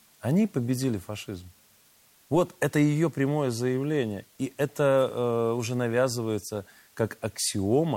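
Low bit depth with dither runs throughout, with rounding at a level that fits 8-bit samples, leaving a constant, even hiss about 35 dB below the speech, without distortion.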